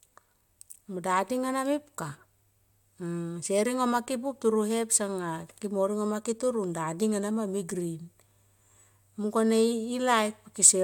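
No technical faults can be heard anywhere in this speech recording. Nothing in the sound breaks, drops out or distorts at any point in the clip.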